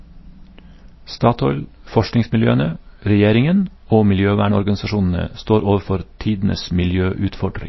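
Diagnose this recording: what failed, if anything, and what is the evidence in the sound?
The codec stage is the likely culprit: MP3 compression, consistent with about 24 kbps, cuts everything above 5.8 kHz and leaves the speech watery throughout.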